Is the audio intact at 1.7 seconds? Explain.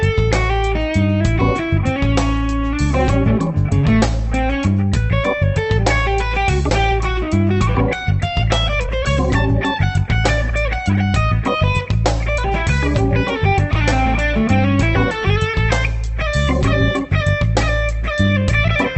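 Yes, the audio is intact at 1.7 seconds, carried through the WebRTC call path with only the ordinary Opus coding character and its top end limited to about 8 kHz.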